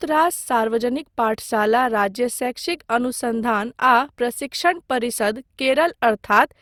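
Throughout the speech, generation loss gives a swirly, hollow, smeared character, with consonant attacks blurred. The likely cause is repeated lossy re-encoding, roughly four passes, each quantising on a shifted frame grid so noise accumulates, consistent with Opus around 64 kbit/s.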